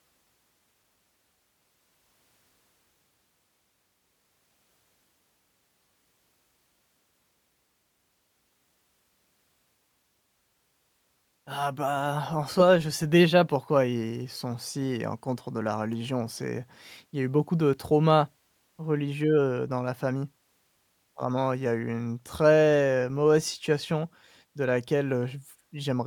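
Nothing goes wrong anywhere in this speech recording, so there's no technical fault to point to at any moment.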